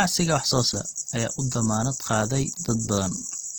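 From start to end, the speech carries plainly audible codec damage. It sounds grainy and rough. Voiced sounds lose their clean tone and pick up a noisy, hashy texture. The band is not narrowed. Content reaches up to about 20.1 kHz. The cause is likely Opus compression in its music mode, at a rate that fits about 16 kbps. Starved of bits, the encoder keeps each band's energy but fills the detail with folded or noisy content.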